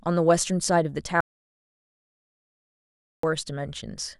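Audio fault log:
1.21–3.23 s, audio dropout to silence: the speech cuts off abruptly mid-flow and returns just as suddenly about 2.03 s later, with the signal falling to silence and the room tone disappearing along with it. That dead, empty floor is what separates it from a natural pause or a noise gate, where some background remains. The likely cause is a lost input link or device, with the recorder continuing to write silence, so that stretch of speech is simply gone.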